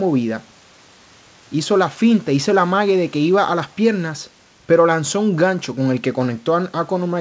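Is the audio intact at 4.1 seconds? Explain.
Yes, the audio is intact at 4.1 seconds: the speech continues without any break or glitch, carried through the call path with the band-limiting to 8 kHz that its G.722 coding imposes.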